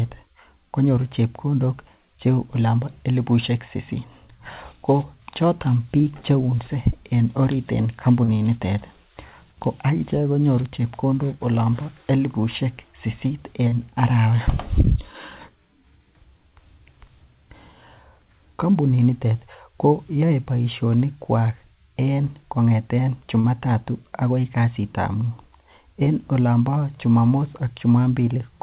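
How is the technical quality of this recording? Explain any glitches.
It's a narrowband call recording with nothing above 4 kHz, consistent with a G.711-style telephone codec, and it has four short concealed packet losses, at 8.24 to 8.31 s, 13.68 to 13.75 s, 23.40 to 23.47 s and 26.04 to 26.10 s. Each time about 40 ms of audio didn't arrive in time, so the receiver stretched the last bit of speech to cover the gap before rejoining the real signal. You hear a quick smear or wobble, and a short consonant can drop out.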